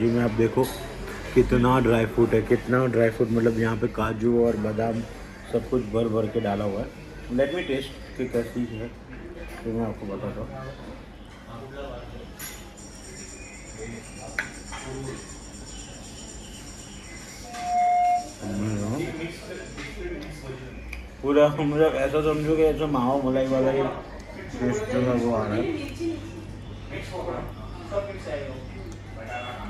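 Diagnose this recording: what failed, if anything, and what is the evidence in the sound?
What failed is the acoustic path: a loudspeaker feedback squeal, where the mic is hearing the speaker it feeds. At 17.44 s a steady tone at 715 Hz appears and swells over roughly a third of a second to sit a few dB above the programme, then cuts off at 18.39 s. That's the loop gain topping unity at one frequency, which then grows on its own until someone breaks the loop.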